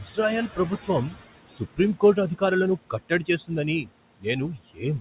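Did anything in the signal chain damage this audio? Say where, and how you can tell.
Yes. In call processing, noise suppressor artifacts run throughout: background noise sinks about 18 dB between phrases and rises under speech.

Speech cut by the noise suppressor at 1.5–1.79 s and 4.56–4.82 s: the suppressor misread soft speech as noise, swallowing roughly a tenth of a second, dropping about 15 dB and about 17 dB respectively.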